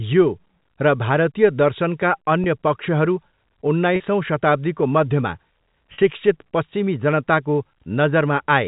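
Three short dropouts come through as packet loss with pitch repetition. The first is at 2.44 to 2.46 s, right after "र भारतीय दर्शनका", and covers about 20 ms, which fits a single lost packet. The others run 3.96 to 4.00 s, just before "शताब्दीको मध्यमा", and 5.94 to 5.98 s, between "शताब्दीको मध्यमा" and "शिक्षित पश्चिमी". Each of those two covers 40 ms, which sounds like two packets in a row. The receiver papers over each gap by replaying the last pitch cycle, so you hear a brief held, buzzy hum where the sound should be moving. All of this sits within the narrow G.711 telephone band.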